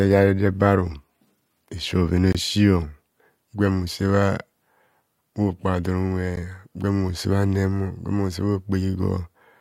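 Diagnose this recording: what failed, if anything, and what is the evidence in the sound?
The speech breaks twice with abrupt, hard-edged dropouts to silence: one from 2.32 to 2.35 s, about 23 ms long, and a shorter one of about 12 ms at 6.36 s. This is a gap between stream segments at the streaming and playback stage. The time stamps of adjacent 2.0 s segments don't quite meet, so the player pads the difference with silence. Nothing is missing from the speech; time is inserted, not removed.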